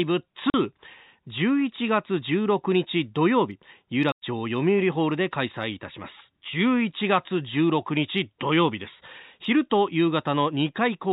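At 0.50 to 0.54 s and again at 4.12 to 4.22 s, the speech drops out completely. This is packet loss filled with silence: the receiver had nothing to play for those stretches and inserted digital silence. The 40 ms and 100 ms holes fit runs of 20 ms packets going missing. Each gap starts and stops abruptly. The band-limited telephone sound of the G.711 path carries through between the gaps.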